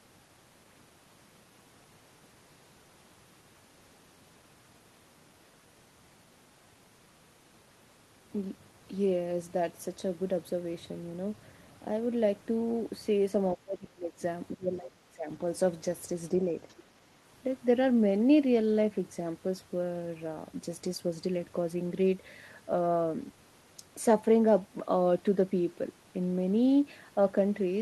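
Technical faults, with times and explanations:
13.55 to 14.15 s and 14.53 to 15.28 s, speech suppressed in double talk: the talker's level sinks hard in both stretches, by about 25 dB at the worst point of the first and about 20 dB in the second, so the speech thins out and partly drops away for a good half second or more each time. Most likely the echo canceller heard both ends talking at once, couldn't tell its own talker from the loudspeaker echo, and clamped down on everything.
16.69 to 16.74 s, other side's voice leaking through: a tiny scrap of a second voice slips in, only about 50 ms long and sitting about 35 dB under the main speech, so it's a faint blip rather than anything you'd follow. That's likely loudspeaker playback of the far end getting back into the mic, with the echo canceller missing this last bit of it.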